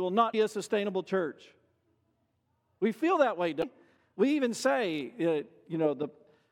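Damaged data in a compressed stream at 0.30–0.35 s, before "a sustainable church", and 3.59–3.64 s, after "feel that way": corrupted frames make the decoder lose sync, producing brief glitches.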